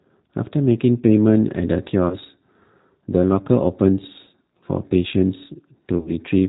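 Throughout, the speech carries G.729 codec damage: the band stops at 4 kHz and the voice has a rough, slightly synthetic grain. That grain comes from rebuilding each 10 ms frame from a filter, a pitch predictor and sparse pulses, and it points to the 8 kbit/s G.729A variant rather than plain narrowband filtering, which stays smooth.

At 2.09 to 2.17 s, 4.24 to 4.29 s and 5.98 to 6.11 s, VoIP packet loss concealed by the speech codec stretches the sound into a fading buzz or coloured noise. The decoder extends its last pitch and filter and lowers the gain frame by frame, so the voice stays weak for a moment after packets return instead of simply dropping to silence. The first gap is about 20 ms and the second about 30 ms. In the last, about 70 ms of loss is scattered over 80 ms, with the longest unbroken run 40 ms.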